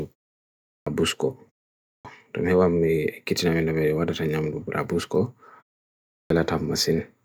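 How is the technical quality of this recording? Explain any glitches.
There's one recurring glitch: clipped starts after a pause at 0.68, 1.87 and 6.14 s. The output seems to doze off in each silence and miss 160 to 185 ms while it wakes, so speech pops in abruptly with its opening sounds cut off. The pauses do go quiet, but that's just the natural gap between phrases.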